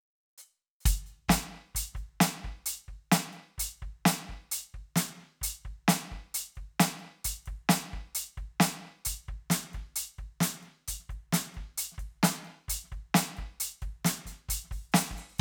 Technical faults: none

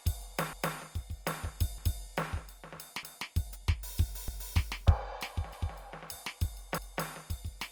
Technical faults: overlapping chunks

